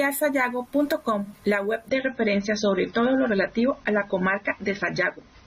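Speech, with an abrupt quality drop at 1.89 s that lasts to the end of the clip: an adaptive stream switching to a lower bitrate. There is no gap at the change. The treble simply falls away, with nothing above about 6.3 kHz, and coding artefacts increase. The player moved to a leaner rendition when throughput fell, and the sound fits a step from roughly 96 kbit/s AAC down to around 24 kbit/s.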